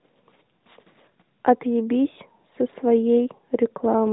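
Speech clip with no faults.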